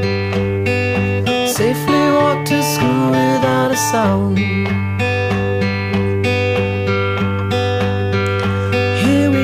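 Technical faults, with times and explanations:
No technical faults can be heard anywhere in the clip. Nothing in the recording calls for a time or an explanation.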